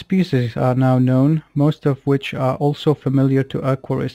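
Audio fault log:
Throughout: crude rate conversion. A steady gritty, inharmonic fizz rides under the speech and grows with louder and brighter syllables. Samples appear to have been repeated to reach the new rate, with no interpolation or anti-imaging filter, which fits a 44.1 kHz to 48 kHz change. The repeats fall in a fixed cycle set by the two rates, so the error forms shifted, inharmonic copies of the voice, sitting roughly 35 dB below the signal.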